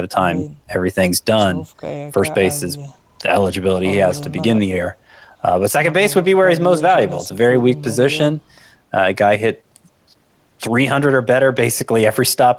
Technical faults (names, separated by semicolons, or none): none